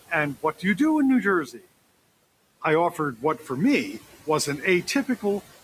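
Across the whole recording the background has a pumping quality: it sinks away in the gaps and creeps back up under the speech. These are noise suppressor artifacts. The suppressor is pulling down, frame by frame, the bands it judges to be steady noise by about 18 dB, and that gating of the room noise, which sits about 19 dB below the speech, is what makes it breathe.

Between 0.42 and 0.8 s the speech briefly goes faint and swallowed, and then again from 1.45 to 1.65 s. In each case a soft stretch loses its edges. This is speech cut by the noise suppressor. Quiet speech energy was mistaken for noise and turned down along with the background, by about 14 dB at worst in the first span and about 13 dB in the second. Roughly a tenth of a second of the first span is affected, and about a fifth of a second of the second.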